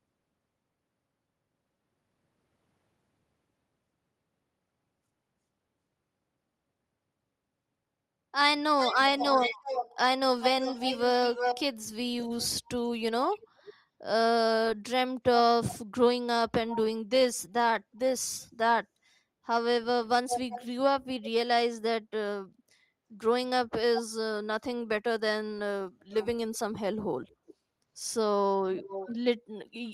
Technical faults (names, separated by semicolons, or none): echo leak